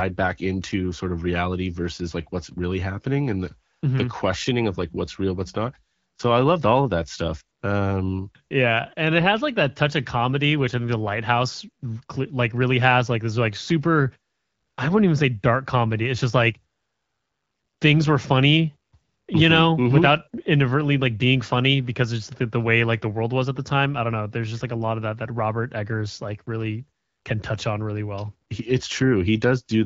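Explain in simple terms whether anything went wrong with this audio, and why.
Nothing went wrong here: this speech clip came through HD Voice, the wideband phone-call format, at one of its clearer settings, and there's nothing amiss to point to.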